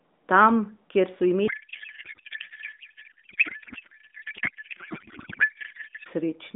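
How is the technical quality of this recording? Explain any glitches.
The recording is narrowband, limited to roughly 200 Hz to 3.6 kHz by an AMR narrowband mobile codec path with light coding damage. Its main problem is a long codec payload misread.

From 1.48 s, just after "kjer so", until 6.08 s, the speech collapses into garbled, warbling noise that barely tracks it. This points to octet-aligned AMR frames being decoded as bandwidth-efficient, so every field is read from shifted bit positions and the decoder synthesises nonsense.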